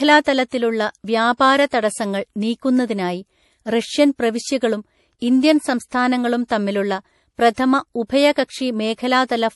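A speech recording, likely squeezed through heavy MP3 compression at a low bitrate near 48 kbps, has nothing above 11.5 kHz and a plainly audible watery, swirly texture throughout. The transform blocks also spread coding noise ahead of sharp onsets, so pre-echo appears as a brief hiss of about 38 to 39 ms before attacks at 0.48–0.52, 1.69–1.73, 5.88–5.92 and 7.54–7.58 s, softening each one.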